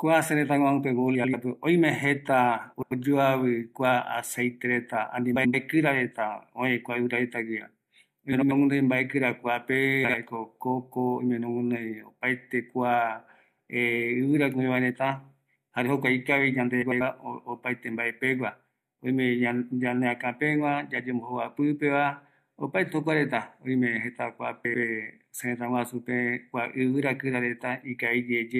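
Frames out of order occur at 1.15–1.34, 2.73–2.92, 5.35–5.55, 8.32–8.52, 10.04–10.15, 16.82–17.01 and 24.65–24.84 s. Adjacent blocks of about 93 ms (46 ms at 10.04 s) play swapped, producing a garbled flutter, though no time is lost.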